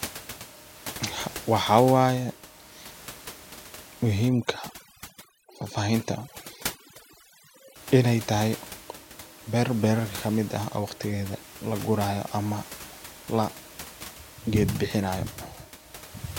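From 4.29 s to 7.76 s there is overdone noise removal. The noise reduction was set far too strong for this stretch. It pulls individual frequency bands down hard whenever they sit close to its noise estimate. Quiet parts of the speech fall below that line and vanish too. The room noise, about 17 dB below the speech elsewhere, drops and breaks up into twinkling specks. This lasts until just before "inay tahay".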